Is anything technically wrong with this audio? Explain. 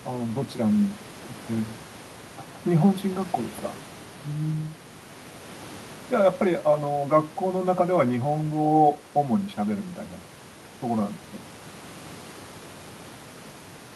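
No, the signal shows no technical fault, and the only background is the room's own noise, which sits about 21 dB below the speech.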